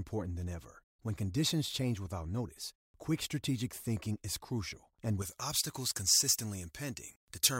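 Speech; from 5.22 s, after "thinking is crucial and", to the end, pre-emphasis is left on: uncorrected treble lift, about 11 dB at 10 kHz, consistent with J.17, sounds thin and sibilant.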